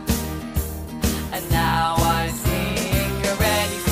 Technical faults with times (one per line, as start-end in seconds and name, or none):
0.10-3.90 word clock ticks